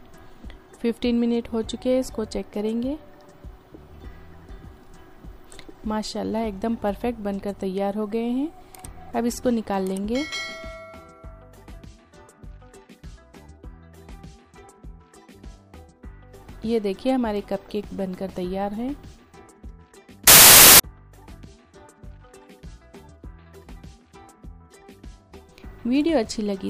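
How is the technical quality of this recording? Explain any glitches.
One glitch stands out: from 20.27 to 20.80 s the audio collapses into a half-second burst of loud, harsh broadband noise, caused by samples built from the wrong bytes. The reader misassembled each sample, by a one-byte offset, swapped byte order or wrong alignment, so the rapidly fluctuating low bits became the dominant part of every value.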